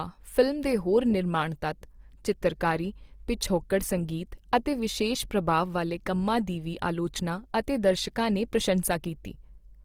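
Opus compression runs through the whole speech clip, and it is likely the cause of the damage heard. The codec keeps each band's energy but fills starved bands with folded or noise content, so tones sound rough and grainy, which fits about 24 kbps in music mode, with content reaching 20.3 kHz.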